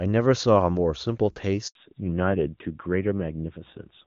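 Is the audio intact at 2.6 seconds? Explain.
No. A repeated buffer occurs at about 2.59 s. New audio arrived late, so the device played the last short block once more. The stretch is about 12 ms, which fits a 512-sample buffer. It sounds like a brief click or buzz, and essentially nothing is lost.

The moment also falls inside a fallback to narrowband, running from 1.75 s to the end. The call drops from AMR-WB at 23.85 kbit/s to AMR-NB at 7.4 kbit/s. Nothing above 4 kHz remains, so the sound turns duller and rougher.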